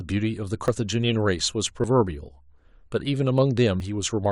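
At 0.68, 1.84 and 3.8 s the speech jumps forward, losing about 40 ms each time with no gap of silence. This is likely a dropped buffer (overrun): samples were overwritten before being read, and the surrounding audio was spliced directly together.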